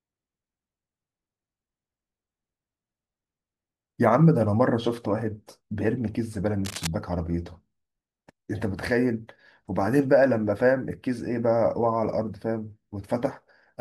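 From 6.65 to 6.87 s, a burst of cable scratch noise sits roughly 10 dB below the speech: dense, uneven crackling and rustling. The likely cause is a worn cable or connector being moved, its contact resistance fluctuating rapidly for that moment.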